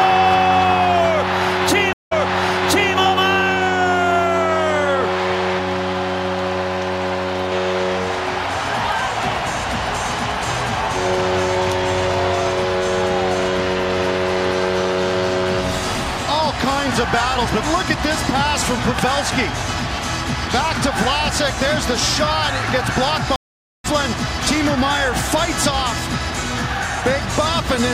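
At 1.93 s a stream reconnect breaks the audio. Sound stops for 184 ms. A fresh decoder restarts 836 ms earlier, repeating material until 2.95 s. At 23.36 s another reconnect brings 482 ms of silence. Playback resumes roughly 0.4 s later, skipping audio.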